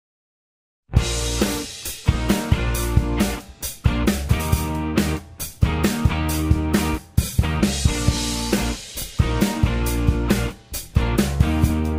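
No technical faults are audible.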